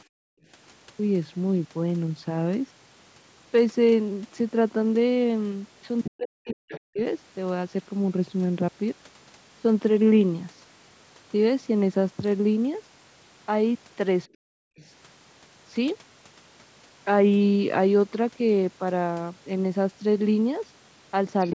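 From 0.05 to 0.48 s the room background sinks away, by about 40 dB at its deepest, before returning. That is background gated by the echo canceller: it clamped the microphone hard while the loudspeaker played, then released it.

At 6.04 to 6.10 s a brief scrap of a second voice sits roughly 10 dB under the talker. Right after, from 6.10 to 6.99 s, the talker's speech is pushed down, by around 40 dB at its deepest, for most of that span, with another faint fragment about 20 dB down at 6.72 to 6.80 s. The same pattern returns at 14.42 to 14.78 s, followed by a scrap some 30 dB down at 14.79 to 14.86 s. The dips are speech suppressed in double talk, likely because both sides spoke at once and the canceller turned down its own talker along with the echo. The scraps are the other side's voice leaking through, likely remnants of the loudspeaker signal the canceller failed to remove.

A final leaked fragment, roughly 25 dB below the speech, appears at 21.40 to 21.53 s. 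Throughout, the call microphone processing leaves nothing above 8 kHz.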